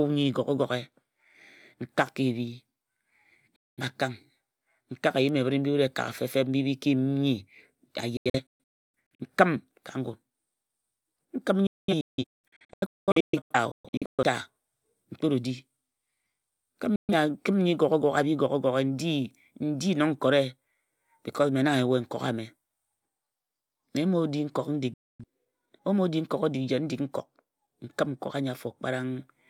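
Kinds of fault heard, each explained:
Digital broadcast dropout: at 3.56–3.82, 8.17–9.25, 11.67–14.23, 16.96–17.14 and 24.94–25.24 s the receiver stops getting valid frames and mutes with a 3 ms fade. The second and third are clusters of short holes, and the speech sent during every gap is lost.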